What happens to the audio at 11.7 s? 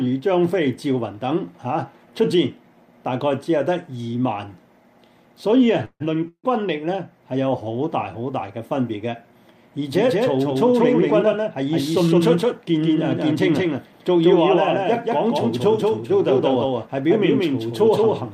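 At 11.7 s two things are stacked. First, there's a doubled audio track that kicked in abruptly at 9.93 s and runs to the end. A second full-band copy sits roughly a fifth of a second behind, at about the same level as the original, with no decay or room colour, so it's a clean, distinct repeat rather than an echo. Most likely the same signal is being captured twice, once through a slower path.

On top of that, you're inside a jitter buffer speed-up running from 11.22 to 14.17 s. The receiver had built up more audio than it wanted, so it trimmed short pitch-period-sized slices over and over, cutting somewhere around 300 ms in total. Playback runs about 9% fast with the pitch unchanged, so this stretch feels a bit rushed and the timing tightens up.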